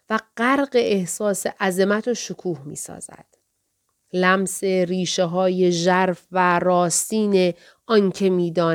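No technical faults can be heard in this speech recording. Nothing in the audio marks a point where the signal breaks, distorts or changes character.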